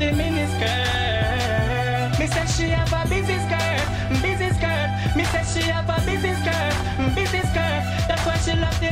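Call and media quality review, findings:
No call or media quality faults found in this review.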